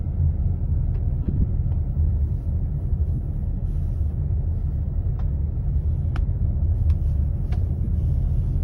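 Lost LE Audio frames occur at 1.23–1.44 s, 3.14–3.21 s and 7.84–7.88 s. The LC3 decoder covers each gap by repeating the last spectrum with random signs, turning tones into a brief noisy smear. The first event scatters about 105 ms of loss, with the longest run roughly 30 ms.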